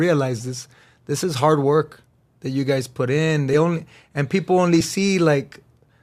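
At 3.53 to 3.55 s, right after "you guys put in" and before "only and people only", the speech jumps forward by around 30 ms, which fits a few compressed frames skipped from a stream using 10 ms frames. A second, smaller skip at 4.80 s, just after "only and people only", drops roughly one frame. The decoder never played those frames, so the audio leaps ahead.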